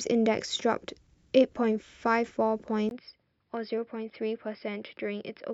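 Speech clip where, at 2.89 s, a 20 ms gap is followed by duller, noticeably quieter audio with a faint new noise floor until the end. This points to a likely input switch to a poorer device. A spectrogram shows content cut off above 5.3 kHz, and the waveform shrinks by around 10 dB.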